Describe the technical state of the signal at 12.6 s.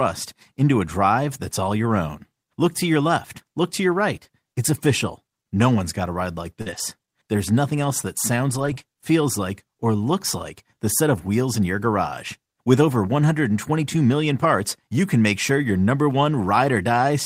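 At 12.6 s the speech comes through intact, with no dropout, clipping, glitch or other technical fault at that moment.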